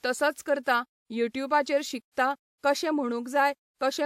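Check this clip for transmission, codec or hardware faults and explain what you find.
There's a codec problem here: pre-echo, at 0.63 s (32 ms), 1.33 s, 2.11 s (58 ms) and 2.58 s (54 ms). Each of these sharp speech attacks gets a brief hiss smeared just ahead of it, because the transform block's noise spills backward.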